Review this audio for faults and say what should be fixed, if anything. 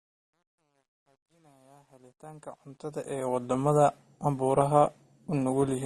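Truncation distortion on a fade, 0.0 to 3.52 s. The speech fades in from near the start and reaches full level at 3.52 s. Through the quietest part, 0.0 to 2.48 s, the sound is gritty. The gain stage that drew the fade kept too few bits and added no dither, so low-level waveforms collapse into a few coarse square steps. The graininess fits roughly 11-bit resolution. To prevent it, apply fades at full bit depth and dither before any reduction in word length.

Transcoding between lossy codecs, throughout. Nothing is heard above 12.2 kHz. The speech carries two overlapping layers of coding artefacts, heard together. This is likely an MP3 pass followed by an Opus pass, and the sound points to rates around 40 and 32 kbit/s. The second encoder wasted bits reproducing the first one's damage and kept its low cut-off. To prevent it, encode once from the original lossless source.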